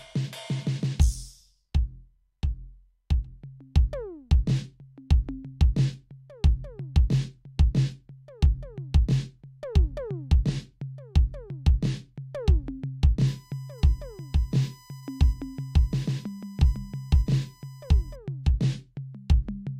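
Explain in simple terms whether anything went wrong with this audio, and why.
From 13.28 s to 18.16 s, a thin, steady whine sits under the music at a fixed pitch of 1 kHz. It is faint. This is USB whine. A USB connection draws power in regular bursts a thousand times per second, and that electrical pulsing leaks through the power or ground wiring into the audio path. That is why the tone holds at exactly 1 kHz and never follows the music.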